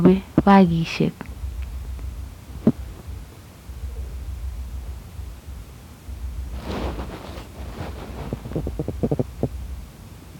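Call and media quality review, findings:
Hard clipping, 0.05–0.58 s: speech peaks driven about 2 dB past a gain stage's ceiling, tops flattened, adding high harmonics heard as crackle on loud syllables.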